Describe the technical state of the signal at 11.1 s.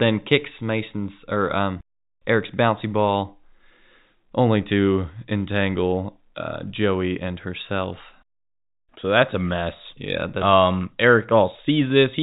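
At 11.1 s the speech is intact, with only the narrow band and faint level-following hiss of its G.711 telephone coding, which is working as it should.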